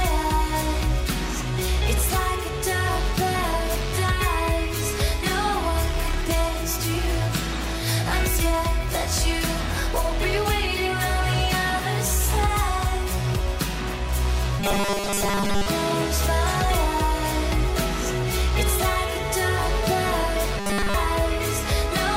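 From 14.60 to 15.66 s, and again from 20.57 to 20.94 s, the sound turns into a rigid, metallic buzz locked at 200 Hz. This is robotic sound from repeated short buffers, and the likely cause is that fresh audio arrived too seldom. The playback looped a 5 ms slice to fill the gaps, so roughly two thirds or more of each stretch is repetition while real audio is skipped. Its rough contour survives under the fixed pitch.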